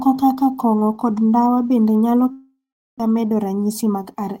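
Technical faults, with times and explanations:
2.31 to 3.02 s, long network dropout: the speech breaks off at 2.31 s and its last sound carries on as a buzzy, fading continuation before giving way to about 0.4 s of silence, so the gap lasts roughly 0.68 s in all. Speech returns at 3.02 s with about 0.6 s of it simply gone. This is likely a network dropout in which no packets arrived, so the receiver improvised sound to cover the hole, then muted, and the playout point shifted by around 70 ms.
3.58 to 4.21 s, jitter buffer speed-up: the speech here runs noticeably quicker, about 108% of normal speed, yet the pitch stays where it was, giving a slightly hurried, compressed delivery. The receiver's jitter buffer was holding more audio than its target, so to bring the delay back down it repeatedly cut out short pieces one or a few pitch periods long, removing around 50 ms of sound across this stretch.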